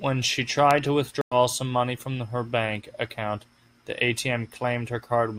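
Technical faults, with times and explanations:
1.21–1.35 s stream reconnect: the speech cuts to silence for about 0.1 s, then a freshly started decoder picks up roughly a tenth of a second further on, so material is skipped. Unlike a plain dropout, the resumption comes in muted or faded in.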